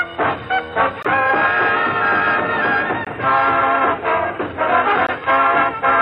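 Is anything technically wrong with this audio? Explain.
Yes. The audio shows a gap between chunks. It was delivered in 2-second chunks, and silence was left at each join. Holes of 20 ms sit at 1.03 to 1.05 s, 3.05 to 3.07 s and 5.07 to 5.09 s. Nothing is lost, but the sound stops briefly at each join, producing short dropouts that recur at a steady two-second rhythm.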